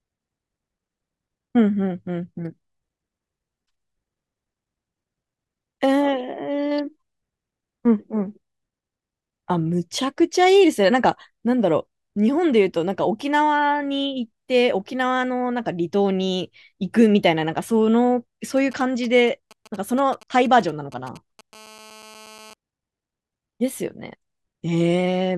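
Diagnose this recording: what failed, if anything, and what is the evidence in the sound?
GSM signalling bursts enter the analogue wiring from 18.57 to 21.41 s: galloping ticks and 217 Hz buzzes, roughly 25 dB down, shown as clustered vertical comb stripes.

GSM phone buzz follows from 21.53 to 22.54 s: rectified radio pulses give a steady, raspy 217 Hz buzz about 24 dB below the speech, drawn as unbroken harmonic lines.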